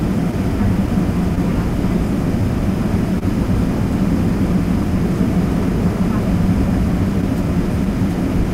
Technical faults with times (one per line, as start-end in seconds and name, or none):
0.00-8.54 clock drift between sender and receiver
0.31-1.99 scattered short gaps
0.61-7.63 repeated timing corrections
3.19-3.23 short stall from a late packet